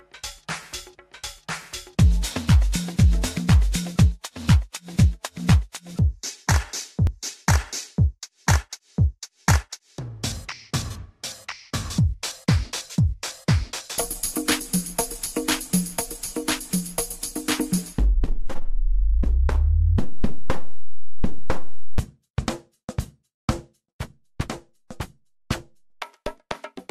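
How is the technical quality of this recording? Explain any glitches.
There is one glitch. At 7.07 s the sound skips forward by a few milliseconds with no gap. This is likely a dropped buffer (overrun): the hardware overwrote that stretch of samples before the program collected it, so the audio on either side was joined directly.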